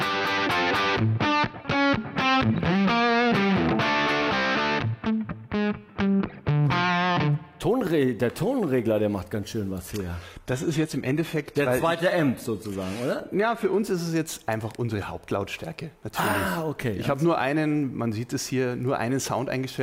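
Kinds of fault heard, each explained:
Adaptive stream at a lower bitrate: the connection slowed, so from 9.79 to 13.79 s the player abruptly swaps to a leaner encode, with more codec artefacts, nothing above 14.9 kHz and no gap.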